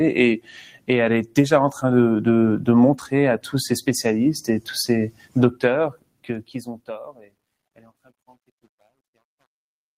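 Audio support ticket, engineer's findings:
Noise suppressor applied to music or sounds, whole clip. Level pumps and flutters. Held tones and tails sink while attacks pass. A speech-tuned suppressor treats steady sound as noise. The gain swing is around 10 dB.

Sound cut by the noise suppressor at 0.37–0.89 s, 5.10–5.36 s, 5.90–6.28 s, 7.12–7.35 s and 7.76–8.11 s. Sustained or decaying sound drops hard, by about 17 dB and by about 12 dB at the last event. The decays are cut short.

Truncation distortion on a fade, 5.60 s to the end. The fade-out starts near 5.6 s. Its quiet end turns gritty. This is worst from 6.27 s onward. The waveform collapses into coarse steps without dither, which fits a 9-bit gain stage.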